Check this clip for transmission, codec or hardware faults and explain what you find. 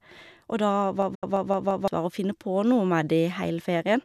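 Two faults affect this speech clip, both around 1 to 2 seconds in.

System hang loop, 1.02 to 1.88 s: the driver stalled while the hardware kept replaying one buffer, about 171 ms long, which fits an 8192-sample buffer. The same fragment repeats five times at about 5.9 per second, a machine-gun stutter that swallows roughly a second of speech.

Digital broadcast dropout, 1.15 to 1.23 s: the receiver stopped getting valid frames, consistent with about three lost frames, and muted until good data returned. Within the looping passage, the sound fades out over 8 ms into a 72 ms hole of silence.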